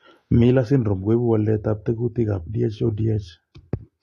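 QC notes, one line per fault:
Throughout, AAC compression: the speech has no content above 13.7 kHz, and the band below is dulled and smeared, with a warbling, fizzy texture on sibilants and held vowels. The cause is likely AAC-LC coding at a bitrate around 32 kbps, which quantises the spectrum coarsely and leaves holes or noise-filled bands. A plain low-pass filter would cut the top cleanly without this swirling texture below the cut-off.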